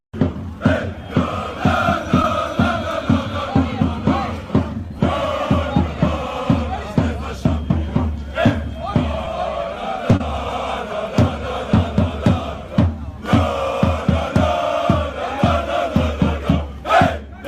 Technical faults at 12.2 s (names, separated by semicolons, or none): none